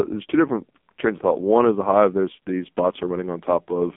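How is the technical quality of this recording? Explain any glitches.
Quality is poor throughout, because the speech has passed through the AMR narrowband mobile codec. For the whole clip the voice sounds buzzy, thin and synthetic, confined to roughly 200 Hz to 3.5 kHz with nothing above. The codec rebuilds speech from a coarse vocal-tract model driven by a few pulses in each 5 ms. Here the damage is heavy, which fits a very low mode of about 5 kbps.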